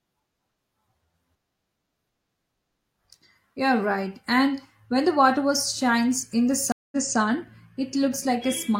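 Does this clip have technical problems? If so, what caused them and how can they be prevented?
Yes, there's a stream reconnect at 6.72 s. The connection dropped, leaving 200 ms of silence, then a fresh decoder resumed 256 ms earlier, so a bit repeats until 7.18 s. A larger client buffer with seamless resume would prevent it.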